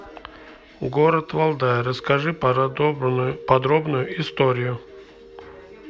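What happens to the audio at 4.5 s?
Nothing goes wrong at 4.5 s; the audio is intact at that point, with no dropout, click, distortion or other fault.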